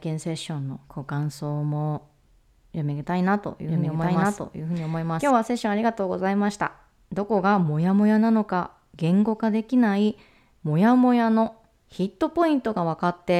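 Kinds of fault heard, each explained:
Doubled audio track: from 3.68 to 5.30 s a second full-band copy of the speech runs about one second behind the original at roughly equal level, with no decay or room colour, cutting in and out abruptly; likely a second capture path or misaligned edit.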